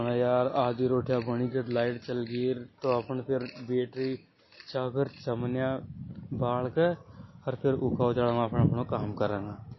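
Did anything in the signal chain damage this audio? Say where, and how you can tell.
Yes, at the codec stage, throughout the speech. The sound is plainly watery and swirly, with a hard ceiling: a spectrogram shows nothing above 5.8 kHz and a flat, sharp edge across the whole clip, plus speckled, flickering patches where weak bands drop in and out frame by frame. This is likely MP3 compression starved of bits, which fits a low bitrate around 24 kbps: the encoder discards the treble and zeroes quieter frequency lines.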